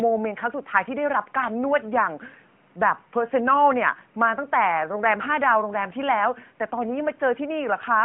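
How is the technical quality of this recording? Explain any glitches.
No glitches: the speech is continuous and steady, with nothing that departs from normal behaviour.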